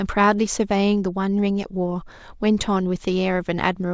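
A speech recording with nothing technically wrong with it.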